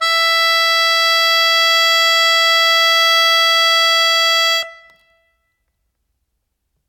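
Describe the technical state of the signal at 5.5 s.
At 5.5 s the music plays through intact, with no dropout, distortion or other fault to be heard at that point.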